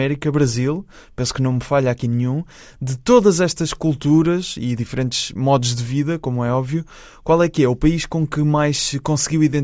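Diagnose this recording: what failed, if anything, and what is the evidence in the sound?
Nothing in the recording points to a failure at any stage of the chain. No event in the speech needs explaining, so there is nothing to diagnose.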